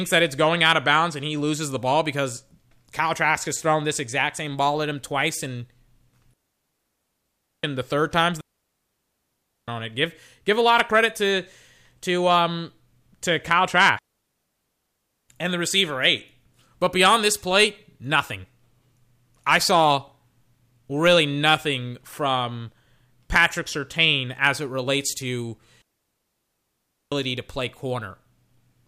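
Four digital wireless dropouts hit this speech: 6.34–7.64 s (ending at "and the third time's"), 8.41–9.68 s, 13.99–15.29 s (before "and the receiver eight"), and 25.82–27.12 s (between "as it relates to" and "to play"). Each time the receiver lost too much of the link and muted for about 1.3 s, leaving a clean, near-silent hole with no noise burst on either side.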